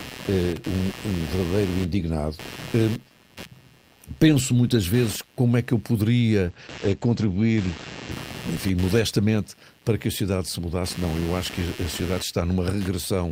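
Computer activity noise runs under the whole recording: a buzzing, chirping layer pulsing at roughly 150 Hz, around 20 dB below the wanted sound. It tracks the computer's processor, graphics or mouse load disturbing the shared audio ground rather than the program material, which separates it from steady mains hum. From 6.47 to 8.17 s a call bitrate drop makes the audio rough and muffled, with treble cut from 20 kHz to about 8 kHz for 1.39 s at its worst. That fits the encoder falling from 32 to 12 kbps, and unlike a fixed low-pass filter it recovers afterward.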